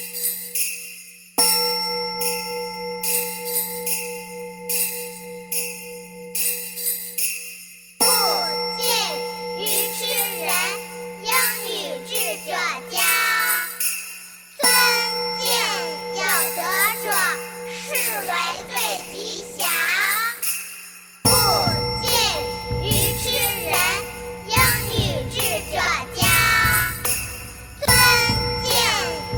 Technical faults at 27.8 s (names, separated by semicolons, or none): chunks out of order